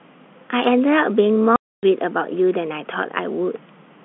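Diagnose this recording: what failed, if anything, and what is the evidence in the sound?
Network stage: packet loss filled with silence. The speech drops to dead silence from 1.56 to 1.83 s, a 270 ms hole with abrupt edges, which fits nine 30 ms packets going missing. The receiver inserted zeros instead of concealing the gap, over the narrow G.711 telephone band.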